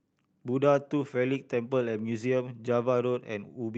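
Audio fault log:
No faults detected in this speech.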